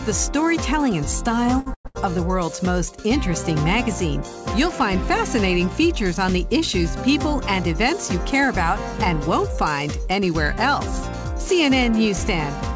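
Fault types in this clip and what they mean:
Short stall from a late packet: at 1.60 s and 1.87 s, the jitter buffer emptied, so the last sound was held for 60 ms, then 83 ms, with nothing lost.
Call audio freeze: from 1.74 to 1.87 s the sound trails off into 80 ms of silence, a 108 ms inserted gap, likely from packets delayed in transit.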